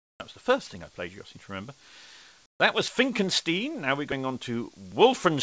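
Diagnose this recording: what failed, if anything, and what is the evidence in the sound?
The fault sits in call processing: comfort noise in place of the background. From 0.0 to 0.2 s and again from 2.46 to 2.6 s, the quiet background gives way to a smoother synthetic noise. It drops about 27 dB in the first gap and about 16 dB in the second. The likely cause is discontinuous transmission. The sender paused during low-level stretches, about 37 dB below the loud parts, and the receiver filled in shaped synthetic noise. Throughout, nothing reaches above 8 kHz, as expected of the G.722 call codec.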